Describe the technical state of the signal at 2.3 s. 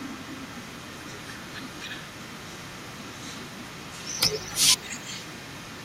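A far-end echo canceller likely failed to remove loudspeaker pickup, so at 2.3 s an echo leak puts a quiet copy of the speech about 0.28 s late, running from 0 to 5.8 s.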